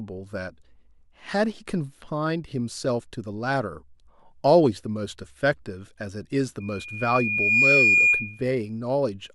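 From 6.60 to 8.44 s a loudspeaker feedback squeal rises at 2.4 kHz: the microphone re-amplifies its own loudspeaker until loop gain passes unity, so a pure tone swells over about a second to roughly 10 dB above the speech, a bright horizontal line on a spectrogram.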